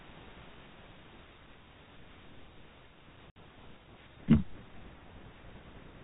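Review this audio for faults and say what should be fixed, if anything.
Packet loss filled with silence: between 3.30 and 3.36 s, packets failed to arrive and the receiver inserted silence instead of concealing the gap. The speech drops out completely for 60 ms, which fits two lost packets of 30 ms each, and both edges of the hole are hard cuts where the audio stops and restarts. The narrow telephone band of the G.711 coding continues on either side of the gap.

To prevent this, turn on packet loss concealment at the receiver and add redundancy or forward error correction so that missing packets are rebuilt instead of replaced with silence.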